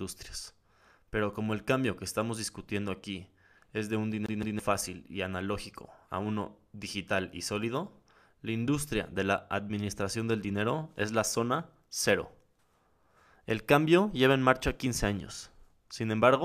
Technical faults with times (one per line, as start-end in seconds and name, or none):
4.26-4.59 CD stuck on one turn